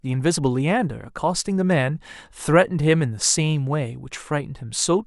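No technical fault can be heard anywhere in this speech recording. There is no moment in it that calls for a time or an explanation.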